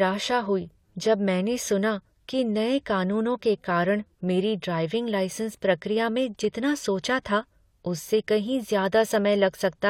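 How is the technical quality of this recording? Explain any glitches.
The speech recording has no audible technical glitches, so there is nothing to explain.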